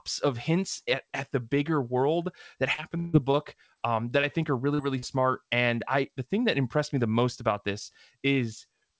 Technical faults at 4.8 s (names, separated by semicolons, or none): short concealed packet loss